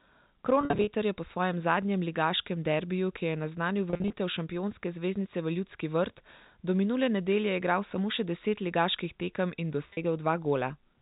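Speech over what sounds like G.711 telephone coding, with packet loss and pitch repetition at 0.61–0.87 s, 3.90–4.10 s and 9.87–9.97 s: scattered short gaps bridged by repeated pitch periods, giving brief held, buzzy blips.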